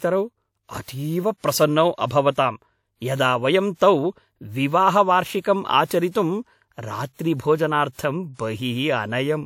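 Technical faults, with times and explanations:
7.13–7.19 s, pre-echo: the transform codec spread quantisation noise across its block, so about 58 ms of hiss precedes a sharp speech attack, smearing its onset.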